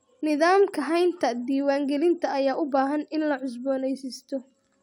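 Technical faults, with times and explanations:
Nothing technical stands out here; the recording holds together with no faults to report.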